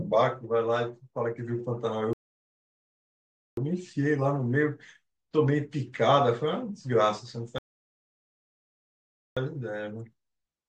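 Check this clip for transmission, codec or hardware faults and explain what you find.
There are two rebuffering stalls, one from 2.13 to 3.57 s and another from 7.58 to 9.37 s. Both times the player ran dry of downloaded audio and sat waiting, so the speech drops to silence, about 1.4 s and 1.8 s of it, then picks up right where it left off. Nothing's missing, it just runs longer.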